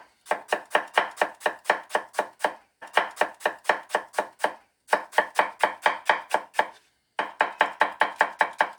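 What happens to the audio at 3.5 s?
A stream segment repeated from 2.81 s to 4.81 s: the player queued the same chunk of sound twice, so about 2.0 s of material plays again. A small blip marks the jump back where the duplicate begins, and the timeline falls two seconds behind.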